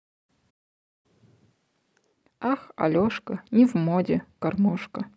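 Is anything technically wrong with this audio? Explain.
Yes, there are two linked faults in this speech clip.

From 0.50 s to 1.06 s there is a playback stall. The player most likely ran dry of buffered data or had its output thread held up, so nothing reached the output for about 0.54 s. You hear the speech cut off abruptly in mid-flow, then a gap of dead silence, and then the sound resumes.

From 1.06 s to 2.13 s there is catch-up at higher speed. Having fallen behind during the stall, the player resamples its backlog to play it 1.5 times faster until the lost time is recovered. Because resampling speeds up the audio and raises its pitch together, the speech turns hurried and chipmunk-like, roughly seven semitones higher, for about a second. It then drops back to normal speed and pitch at 2.13 s.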